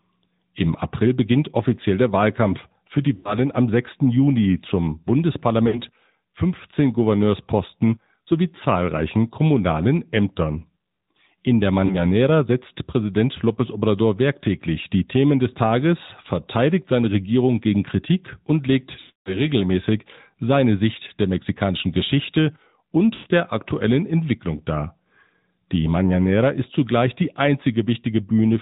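A speech recording carried through the AMR narrowband mobile codec, at a rate that fits 10.2 kbps, so nothing above 4 kHz survives and the voice has a buzzy, synthetic edge. A plain low-pass filter would only dull the sound, but here the vocal-tract model itself adds that buzz. Lost AMR speech frames interrupt it five times: at 3.16 to 3.38 s just after "für die", at 5.68 to 5.81 s, at 11.86 to 12.06 s, at 19.0 to 19.37 s just before "regelmäßig seine", and at 23.14 to 23.28 s just before "der aktuellen". The gaps run 80, 60, 40, 260 and 120 ms. Unlike a network dropout that cuts to silence, each gap smears the last sound and fades it out, and the longest gap at 19.0 s decays fully before the voice returns rough.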